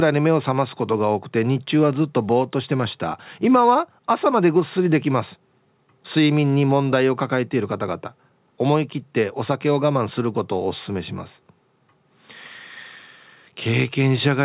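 No technical faults are audible.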